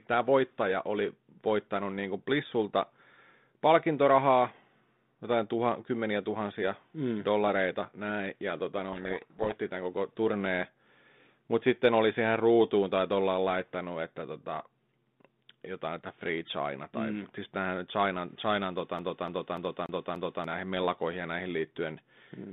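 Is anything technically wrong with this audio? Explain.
Yes, there are two faults in this speech clip, which runs through a G.726 telephone path at 32 kbit/s with its band limited to roughly 150 Hz to 3.7 kHz.

From 8.92 to 9.56 s, between "dollareita näin ja tota" and "tämän koko turneen", there is a codec payload misread. The decoder takes the G.726 code words with their bit order reversed, so each sample's difference value is wrong and the adaptive predictor drifts. The speech is buried under harsh, grinding distortion for the whole 0.64 s, and it clears once the two ends agree on the format.

From 18.99 to 20.44 s, just before "näihin mellakoihin ja näihin", the audio behaves like a CD stuck on one turn. A scratch throws the laser back one track at the same point on every revolution, so a 0.29 s segment repeats five times, with a brief mute at each jump. The result is the fast, evenly spaced stutter of a skipping disc before playback moves on.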